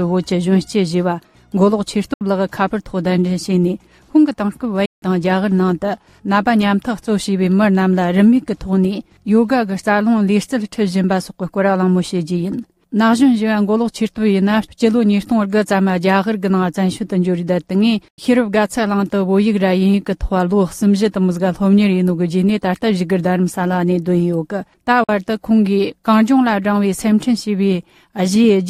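At 2.13 s the sound cuts out for about 70 ms. It happens again at 4.85 s for about 160 ms, at 18.08 s for about 90 ms, and at 25.04 s for about 46 ms. Each gap starts and ends sharply or with a fade of a few milliseconds. When the sound returns, it has moved on, as if it kept playing through the silence. This pattern points to a likely Bluetooth dropout. Packets arrived too late for the headphones, which were left with nothing to play.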